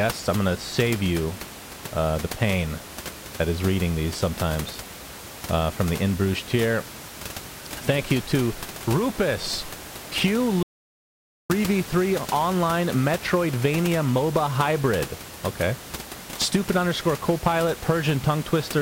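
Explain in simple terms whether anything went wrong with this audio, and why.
Something did go wrong: there's an audio dropout to silence from about 10.63 to 11.50 s. The speech cuts off mid-flow, and for nearly nine-tenths of a second there's dead silence. Even the low room noise you hear under the rest of the recording vanishes. Then the sound snaps back. The likely cause is the input briefly dropping, from a loose connection, a failed link or an accidental mute, while the recorder kept writing silence. Whatever was said in that gap is lost.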